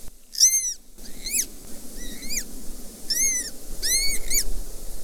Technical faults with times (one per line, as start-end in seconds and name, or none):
0.00-5.04 wrong sample rate